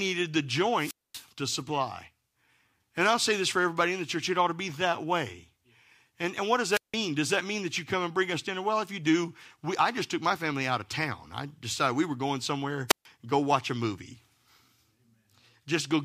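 Wireless microphone squelch dropout hits the speech three times, from 0.75 to 1.27 s, 6.71 to 6.95 s and 12.88 to 13.06 s. Each time the radio signal fades, hiss swells, and the receiver's squelch mutes output for about 240, 170 and 140 ms. This shows as broadband noise smearing the spectrogram, then a flat waveform gap.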